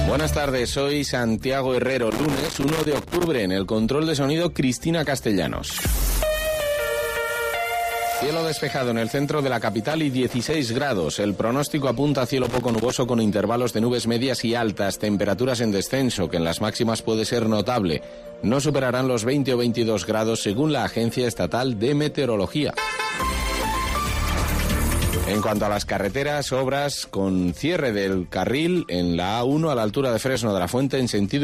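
Irregular bursts of crackle and scratching break into the sound three times: from 2.10 to 3.27 s, from 9.90 to 10.54 s, and from 12.44 to 12.92 s. This is loose connector crackle. A worn or dirty contact somewhere in the signal path is shifting, so the connection keeps making and breaking in rapid, uneven succession. That chops the signal into fragments, which is why each burst sounds rough and erratic rather than steady.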